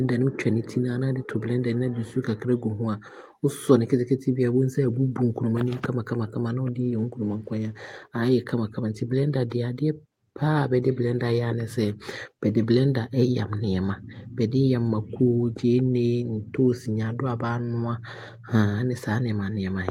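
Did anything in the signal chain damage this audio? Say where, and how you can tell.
No, nothing damaged this audio.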